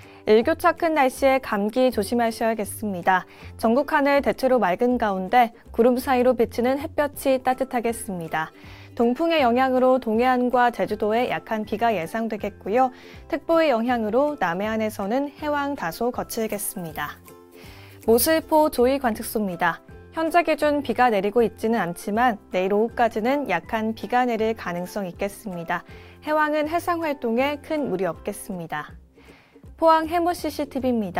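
From 16.24 to 18.65 s, pre-emphasis is left on. The treble boost, which fits a 50 µs FM curve, was never undone: about 11 dB extra at 10 kHz, so the sound turns thin, bright and sibilant.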